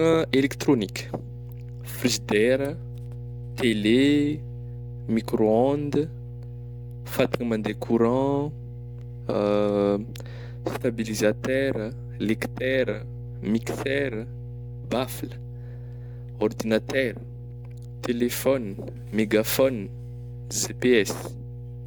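A steady mains hum at 60 Hz runs under the speech from start to finish, sitting roughly 15 dB below it. Power-line current is leaking into the signal path, through a ground loop or a nearby transformer, leaving a constant low drone.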